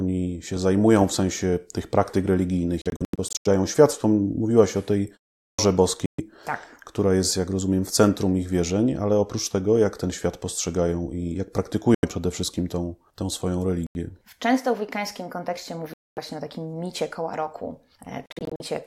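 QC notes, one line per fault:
2.82–3.47, 6.06–6.20, 11.95–12.05, 13.87–13.96, 15.94–16.18, 18.26–18.62 s: Bluetooth dropout. Speech vanishes in abrupt holes and resumes as if it had played on, likely from late wireless packets being dropped. The first and last holes are broken into short gaps, up to 85 ms. Landmarks are after "wszystkim tą tą swoją" and between "w wikańskim kontekście" and "o takim micie koła".
5.45–5.59 s: Clipped start after a pause. After "o tej" and a 0.36 s pause, about 137 ms of the next onset is swallowed while the output wakes.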